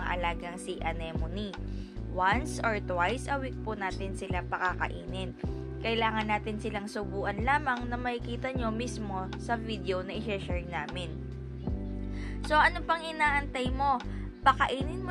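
No technical faults are audible.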